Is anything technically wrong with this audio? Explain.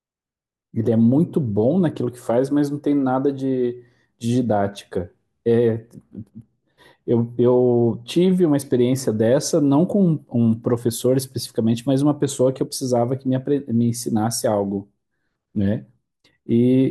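No, nothing technically wrong can be heard here.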